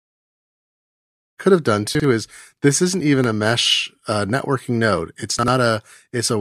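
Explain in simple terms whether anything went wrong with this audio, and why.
Yes, at two points the system delivered chunks out of order: a roughly 46 ms piece of this speech played one chunk late, swapped with its neighbour. At 1.95 to 2.04 s, between "they could have done" and "is this isn't even", and again at 5.39 to 5.48 s, the sound briefly jumbles at the hard joins.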